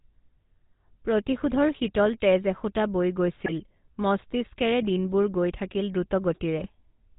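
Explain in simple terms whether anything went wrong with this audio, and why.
Yes, two things went wrong. The whole recording has passed through the GSM full-rate codec, the speech coder used by early mobile phones. It rebuilds the voice from a rough model of the throat and mouth driven by a sparse train of pulses, so the speech sounds buzzy and gravelly throughout, and everything above 4 kHz is gone. Unlike a simple muffled phone line, this roughness sits inside the voice itself and never lets up.

On top of that there are two short bursts of GSM bit errors, where corrupted data reached the decoder. The first runs from about 3.40 to 3.52 s, between "শীতল তেজ এসোঁতা বৈ" and "মস্তিষ্কেৰে দিনবোৰ গৈ থাকিল"; the second from about 6.58 to 6.68 s. In each, the voice briefly squawks and gargles as the tone and loudness go wrong for a moment. This is different from a dropout, which would leave silence or a smoothed-over gap.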